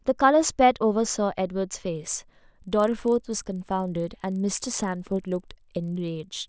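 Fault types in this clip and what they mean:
Resampler restarted on every block: from 1.92 s to the end, the rate converter handled each 40 ms block in isolation, treating the samples beyond each block's edges as missing instead of carrying them over from the neighbouring block. This conversion likely went from 24 kHz down to 16 kHz. Each boundary picks up a small error, and together these produce a buzzy 25 Hz ticking that rides on the speech and is heard only while there is signal.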